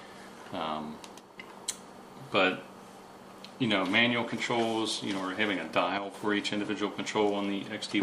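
The audio has two sudden gain jumps: the level drops by about 5 dB from 1.2 to 1.38 s, then by about 7 dB from 5.98 to 6.14 s, with background noise shifting together. The likely cause is a gain setting applied instantly, without a ramp.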